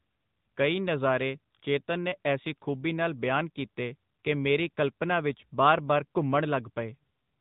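From start to finish the speech sounds thin, boxed-in and buzzy, with a synthetic edge on every syllable and no air or sibilant sparkle above about 4 kHz. This is the AMR narrowband mobile codec at work: the audio has been squeezed to 8 kHz sampling and rebuilt from a vocal-tract model excited by a few pulses per 5 ms slice. The damage is plainly audible and points to a mid-to-upper AMR-NB mode around 10 kbps.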